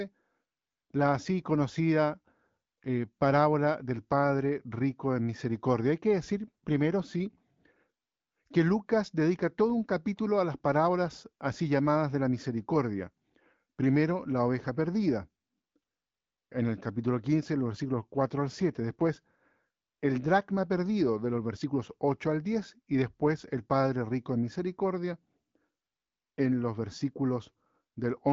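No technical faults are audible anywhere in this recording.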